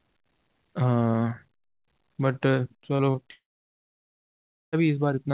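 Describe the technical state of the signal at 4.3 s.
At 4.3 s the signal sits inside a long network dropout running from 3.32 to 4.76 s, likely from lost packets. Concealment briefly stretches the last sound into a fading buzz, then about 1.3 s of silence remains, so this moment is silent before the band-limited, 4 kHz-capped audio returns.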